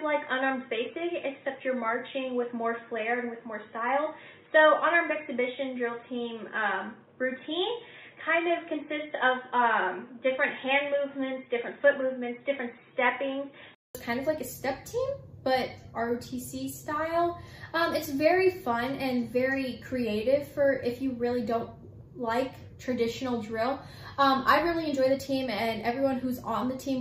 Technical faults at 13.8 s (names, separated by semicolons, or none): input switched to a poorer device